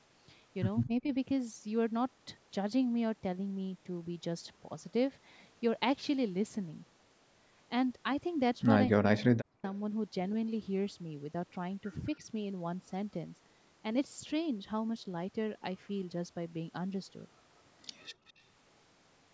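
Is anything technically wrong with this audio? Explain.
Yes. The speech has three kinds of fault.

Speech suppressed in double talk occurs from 0.85 to 1.08 s and from 8.88 to 9.63 s. The voice dips sharply. The first dip is moderate. The second is far deeper and lasts about half a second. The likely cause is an echo canceller mistaking simultaneous talk for echo and turning everything down.

Background gated by the echo canceller occurs from 18.12 to 18.25 s. The room sound drops by about 17 dB for a moment, then returns. The canceller clamped the microphone while the loudspeaker played. It released it once the canceller let go.

Echo leak follows from 18.27 to 18.41 s. A faint delayed copy of the voice appears, very low against the speech, 209 ms behind it. This is likely loudspeaker sound the loudspeaker side's canceller failed to remove. That residue was sent back down the line.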